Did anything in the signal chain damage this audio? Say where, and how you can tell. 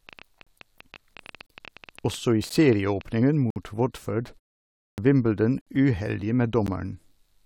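Yes. A train of clicks runs from 0.09 to 3.02 s, likely from interference at the analogue wiring or a struggling interface. Roughly 30 similar pulses arrive at an irregular pace of about 10 per second, peaking about 5 dB above the speech and ticking audibly through the sound.

At the streaming or playback stage, the time stamps of consecutive segments, which arrive every second, leave small holes that the player fills with silence. Hard-edged dropouts interrupt the speech at 0.43 s (36 ms), 1.46 s (31 ms), 2.49 s (11 ms), 3.50 s (56 ms), 4.58 s (33 ms), 5.61 s (54 ms) and 6.67 s (14 ms). No audio is actually lost at these points.

There is also a clipped start after a pause at the output device. After 0.52 s of quiet, the device needs time to wake and lock again, so the first 149 ms of speech from 4.83 s is swallowed. That speech then begins abruptly, missing its opening sounds.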